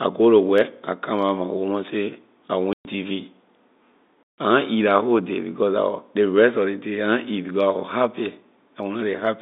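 Packet loss filled with silence breaks up this telephone-band speech recording twice, at 2.73 to 2.85 s and 4.23 to 4.38 s. The gaps last 120 ms and 150 ms, which fits runs of four and five lost 30 ms packets. The receiver substituted digital silence for the missing audio, so each hole starts and ends with an abrupt cut. The G.711 mu-law line coding stays confined to the 200 Hz to 3.7 kHz band.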